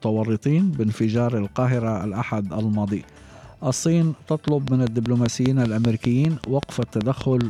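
From 4.48 s to 7.42 s, a train of clicks ticks over the sound at a regular 5.1 per second. That is about fifteen pops, peaking about 15 dB above the signal. Interference is the likely cause.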